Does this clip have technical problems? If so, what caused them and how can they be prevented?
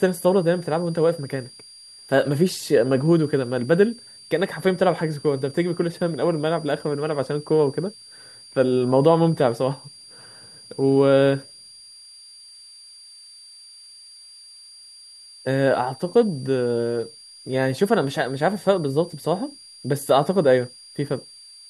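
Yes, there's a switching supply whistle running under the speech the whole way through, a thin tone wandering between about 4.64 and 4.8 kHz, roughly 25 dB below the speech. A nearby switch-mode power supply is dropping into an audible burst mode or beating against another supply. Powering the recording gear from a linear or battery supply, or moving it away from the offending adapter, should keep it out.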